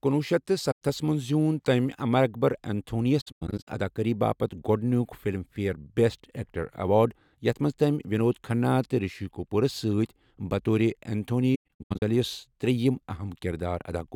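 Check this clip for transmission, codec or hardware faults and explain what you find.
The speech has AAC frame loss with muting in three places. At 0.71 to 0.82 s there's one clean gap of about 0.1 s. From 3.21 to 3.68 s and again from 11.55 to 12.02 s, the dropouts are scattered across roughly half a second, the longest run lasting around a tenth of a second. The decoder zeroes the spectrum of each missing frame, and the overlapping windows ease the sound out and back in over roughly 21 ms, which fits 1024-sample frames. So you hear soft-edged holes and stutters.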